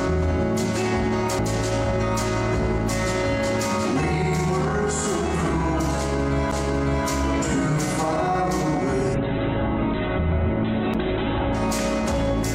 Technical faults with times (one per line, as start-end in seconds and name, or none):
1.39 CD skip
6.51 CD skip
9.15-11.66 call bitrate drop
10.94 CD skip